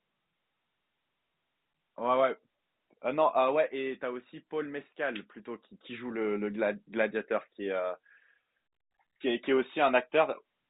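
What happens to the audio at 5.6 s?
At 5.6 s the audio is intact, with the speech carried on cleanly through the telephone-band G.711 coding, which cuts everything above about 3.8 kHz.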